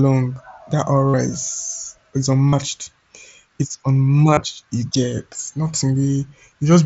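At 1.09 to 1.14 s, 2.48 to 2.53 s and 4.34 to 4.37 s, the speech turns into a brief buzzy held tone, lasting about 50, 45 and 30 ms, with a slight warble as it resumes. This is concealed Bluetooth headset packet loss: headset packets went missing, and the phone filled each gap by repeating the closest-matching recent snippet of waveform.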